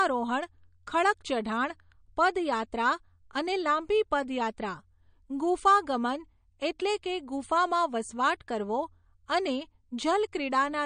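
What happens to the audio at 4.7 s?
Speech at 4.7 s sounds watery and swirly, likely from MP3 compression running throughout. Short of bits, the encoder cuts everything above 9.6 kHz and drops weak detail.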